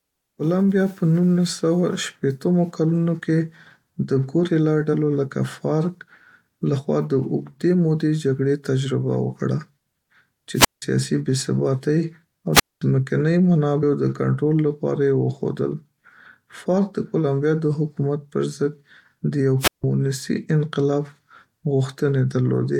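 At 4.93 s the speech jumps forward by about one compressed frame, roughly 20 ms, and at 13.82 s by about three frames, roughly 70 ms. These are compressed frames skipped: the decoder never played those frames. The spacing fits a frame length of 23.2 ms.

A wireless microphone squelch dropout occurs at 10.54–10.82 s, 12.53–12.82 s and 19.59–19.84 s, the last just after "د یو". Each time the FM radio signal weakens, hiss swells, and the receiver's squelch mutes the output for about 175 ms, 221 ms and 164 ms respectively before the speech comes back.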